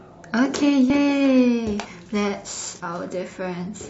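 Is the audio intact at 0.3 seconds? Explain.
Yes, at 0.3 seconds the speech runs on cleanly with no dropout, click, distortion or other audible fault.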